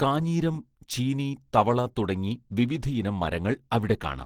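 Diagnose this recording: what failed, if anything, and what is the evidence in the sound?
Codec stage, throughout the speech: plainly audible Opus compression, likely in its hybrid speech mode at a low rate near 16 kbps. The voice sounds hoarse, rough and grainy rather than swirly, with content still reaching about 20.2 kHz. MP3 damage would leave spectral holes and watery swirl instead.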